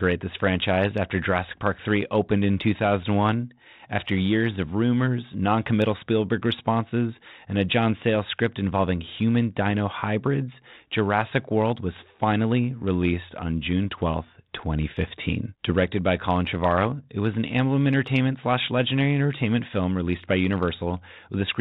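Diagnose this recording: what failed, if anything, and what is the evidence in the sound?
Nothing failed in this recording, and the sound gives no evidence of a fault at any stage.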